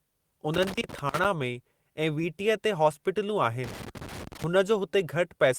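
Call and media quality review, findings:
Loose connector crackle, 0.54–1.25 s and 3.64–4.44 s, speech. Irregular scratchy bursts from a worn or dirty contact making and breaking. Waveform shows chopped dropouts; spectrogram shows scattered broadband vertical streaks. Check cable and jack.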